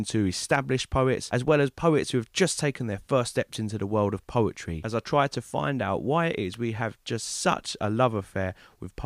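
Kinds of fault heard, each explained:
Electrical switching spike: at 3.53 s and again at 6.54 s, a sharp snap lands on top of the speech, each one only a few milliseconds long and sitting apart from the voice rather than belonging to it. The first peaks near -20 dBFS, the second a little softer at around -25 dBFS. These are likely short arcs from a nearby switch, motor or static discharge, picked up by the audio line as brief electrical bursts.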